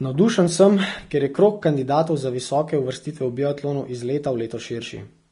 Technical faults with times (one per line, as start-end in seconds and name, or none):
0.00-5.32 Vorbis compression